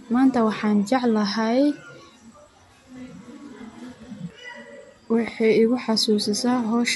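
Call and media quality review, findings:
No technical faults found in the speech signal; nothing heard points to a defect in capture, processing or transport.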